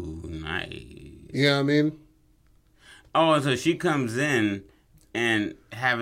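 A short speech recording, and nothing in its signal points to a technical fault.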